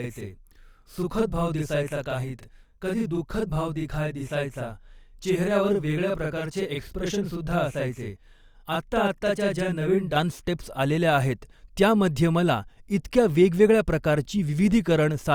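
From the start to about 10.16 s, the speech sounds doubled, each syllable trailed by a close second copy at equal level. This is channel delay (doubling): one channel runs 40 ms late, and summing both to mono exposes that offset as a slap.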